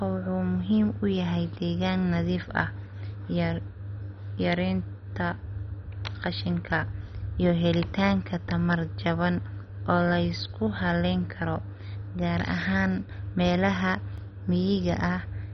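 A speech clip with two faults. The likely cause of the first is heavy MP2 compression at a very low bitrate, around 32 kbps: whole upper sub-bands are dropped, leaving nothing above 6.1 kHz, so the speech sounds dull and gurgling, with granular distortion. Second, a block of digital silence at 14.18 s, about 0.73 ms long, which fits a 32-sample block of zeros, cuts the sound abruptly and is heard as a tick or dip.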